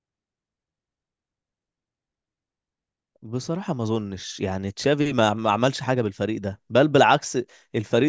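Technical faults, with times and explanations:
No technical faults can be heard in this speech recording; the signal stays continuous and stable for its whole duration.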